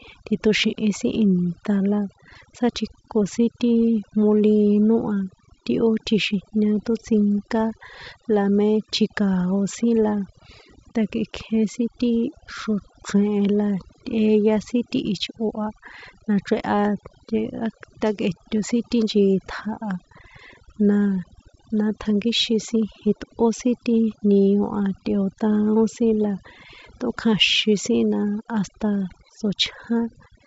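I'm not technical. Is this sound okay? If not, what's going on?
No. A noise reduction step was set too strong, which is overdone noise removal. Throughout the speech it shuts off parts of the sound it mistakes for background noise, leaving near-silent gaps with twinkling specks.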